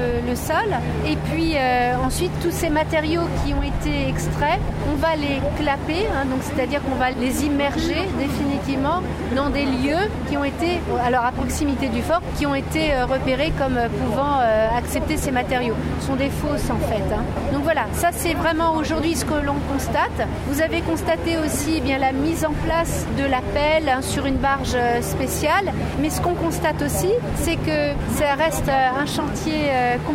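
No technical faults can be heard anywhere in the audio.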